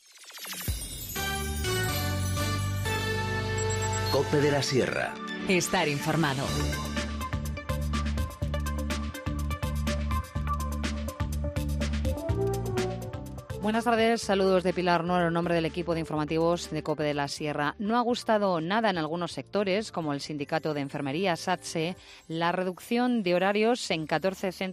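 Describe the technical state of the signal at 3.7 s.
At 3.7 s the signal is intact, with no audible fault at that moment.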